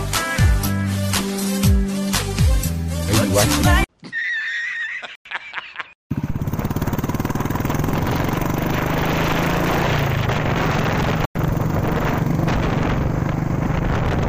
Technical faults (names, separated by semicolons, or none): gap between chunks